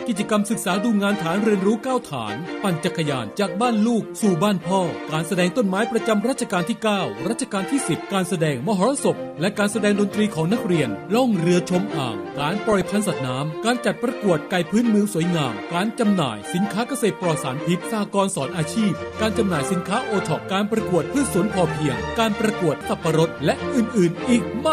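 MP2 compression runs through the whole clip. The sound is dull and the top end is missing, with a gurgling, grainy roughness on everything. This is likely MPEG Layer II coding at a rate around 80 kbps. The coder divides the signal into 32 equal sub-bands and shares out a limited bit budget, so it shuts off the upper bands. The bands that remain are quantised coarsely and flicker in and out.

DAB burbling appears from 12.37 to 12.87 s as a half-second patch of short noise blips in single sub-bands over the sound. Bit errors, at a rate of a fraction of a percent, got past the error correction into the Layer II data. Corrupted samples put short blips of noise in single sub-bands, and corrupted scale factors, where they get through, make sub-bands jump in level for up to a frame. The disturbed stretch points to roughly 23 frames being damaged.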